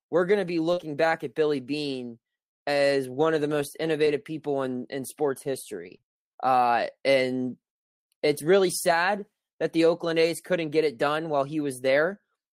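At 0.73 s the speech hits a short concealed packet loss lasting to 0.79 s. About 40 ms of audio never reached the decoder in time, and the receiver bridged roughly 34 ms of it by extending the preceding sound before fading back into real signal. It comes across as a brief smear or wobble rather than silence. Unlike the faults that follow, nothing real was recovered here. The filler is extrapolated from what came just before.

Overlapping it, from 0.77 to 0.83 s, is a lost packet rebuilt from error correction. Here 40 ms was restored from the low-bitrate backup copy carried in the next packet, which points to two lost packets. No gap or smear appears. Instead the segment turns coarse and noisy. That roughness with the timing intact is what separates it from the concealed loss just before it, which carries the smear of guessed sound.

Between 4.05 and 6.06 s come scattered short gaps: around three isolated drop-outs, the longest near 20 ms, together touching only about 3% of that two-second stretch. 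In total about 60 ms went missing, with roughly 50 ms patched by continuing the last sound and 100 ms rebuilt from backup data. The result is a few separate ticks or hiccups in otherwise clear-sounding speech, spread out rather than clustered into one smear like the event at 0.73 s.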